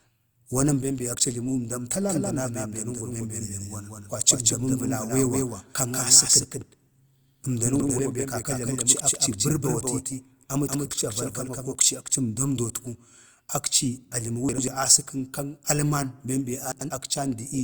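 From 2.09 s to 11.75 s a doubled audio track runs under the speech: a second, full-band copy trails the original by roughly 200 ms, about 5 dB quieter. The likely cause is the same signal reaching the mix twice, once through a slower path. Unlike an echo or room reflection, the copy has no decay and no added colour, and it switches on and off abruptly at those two points rather than fading.

At 7.80 to 7.99 s, again at 14.49 to 14.68 s and at 16.72 to 16.90 s, chunks play out of order. In each case a block of about 93 ms arrives one chunk late and is heard after the block that should follow it. Each spot sounds like a brief jumbled stutter with three hard joins. What separates this from a dropout is that no audio is missing; the same material is simply heard in the wrong sequence.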